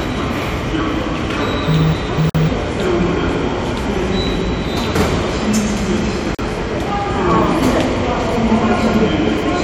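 At 2.30 s and again at 6.35 s, roughly four seconds apart, the sound drops into silence for 52 ms and then 40 ms. These are gaps at joins of encoded pieces, where separately encoded segments kept their encoder start delay and final-frame padding. Unlike a dropout, nothing is lost: the sound resumes exactly where it stopped, with smeared edges.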